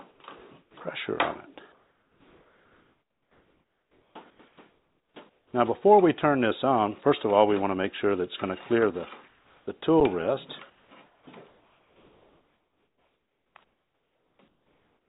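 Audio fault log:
0.11–0.20 s, 0.62–0.74 s, 1.50–5.53 s, 9.28–9.67 s, 10.70 s to the end: comfort noise in place of the background. The sender likely stopped transmitting in pauses, so the receiver substitutes synthetic hiss, about 5, 12 and 3 dB quieter in the short gaps. On a spectrogram these spans look smooth and featureless, capped at 4 kHz like the G.711 call audio.
5.49–5.53 s: onset clipped by the voice detector. The detector was likely slow to register returning sound, so 40 ms of its start went unsent and filled with comfort noise. The waveform jumps from flat hiss straight into the sound, with no gradual rise.
10.00 s: underrun with held sample. The output buffer ran dry for 8 ms and the converter held its last value, so the waveform shows a short flat shelf. Playback resumed where it stopped, so the sound pauses and restarts without a sharp click.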